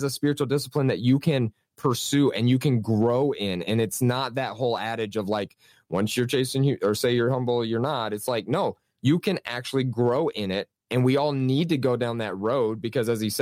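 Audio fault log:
Throughout, the speech signal stays intact and stable, with nothing a careful listener would flag as a technical fault.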